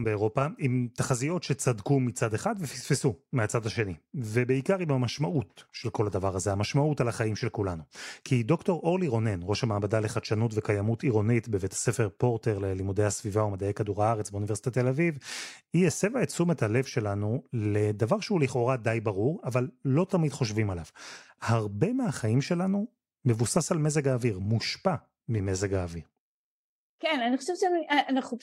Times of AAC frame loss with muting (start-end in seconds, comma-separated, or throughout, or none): none